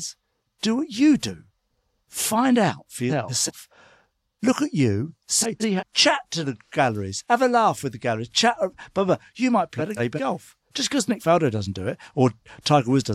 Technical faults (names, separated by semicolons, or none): frames out of order